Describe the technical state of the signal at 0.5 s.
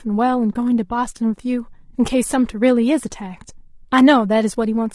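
Between 0.53 and 0.56 s the sound dips briefly and returns. This is AAC frame loss with muting: the decoder zeroed the spectrum of a missing 20 ms block, which fits a single lost frame, and the overlapping windows smear the fade-out and fade-in across the gap.

Around that hole the speech is rough and grainy, with noise filling the gaps between harmonics and a thin, synthetic-sounding top band. This is likely low-delay AAC compression, and the strain is consistent with AAC-ELD running near 32 kbps.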